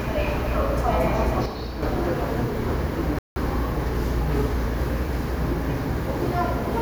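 At 1.46 s the level drops abruptly by about 6 dB and stays down until 1.83 s, where it snaps back up. That's a sudden gain jump: the sound and its background noise fall together in a single step rather than fading. It's most likely a digital gain setting being applied from one sample to the next with no ramp, so the change lands as a hard edge rather than a smooth move.

Then at 3.19 s the audio cuts out mid-flow and there's dead silence for about 175 ms, up to 3.36 s. That's a playback stall. The gap is long enough to notice as a hiccup in the sound rather than a tiny dropout. The likely cause is the player running short of data, or its output thread getting blocked for a moment, so nothing reached the output until it recovered.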